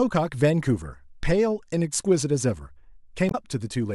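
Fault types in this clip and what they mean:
Damaged data in a compressed stream: corrupted bytes near 3.28 to 3.35 s throw the decoder out of sync, so the speech breaks into a brief glitch.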